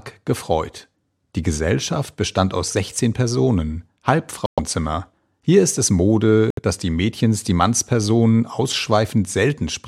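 At 4.46 s the speech drops out dead for about 0.14 s, and it happens again at 6.50 s for about 0.09 s. Both are corrupt frame muted faults: bit errors damaged some compressed frames, the decoder threw them out, and the player filled the gaps with silence. The holes open abruptly, and their lengths point to a short run of lost frames each time. Timing holds, so the speech resumes right on schedule.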